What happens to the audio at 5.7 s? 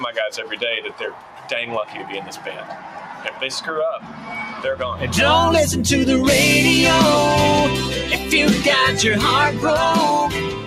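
At 5.7 s a noise suppressor applied to music or sounds is at work, as it is across the whole clip. It treats sustained tones and tails as noise and pulls them down by around 10 dB. Onsets pass, held parts sink, so the sound pumps and thins.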